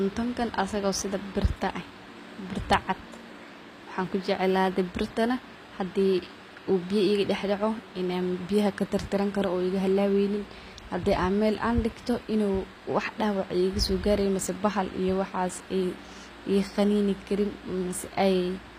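Running under the speech from start to finish is computer activity noise: a buzzy, chirping layer pulsing at around 200 times a second, sitting roughly 35 dB below the voice. It doesn't follow the talking at all. It tracks whatever the machine was doing, because load swings in the processor or graphics hardware were shaking the ground shared with the audio circuit, and that wobble leaked straight into the recording path.

The whole clip also has a clearly audible coded sheen, likely from HE-AAC compression. The s sounds come out gritty and a bit metallic or lispy, and the top end feels synthetic, with nothing at all above 15.4 kHz. That fits a low bitrate around 24 kbps, where only the lower spectrum is really coded and the treble is patched together from copied lower bands. The harmonics don't line up across that join, which is where the grit comes from.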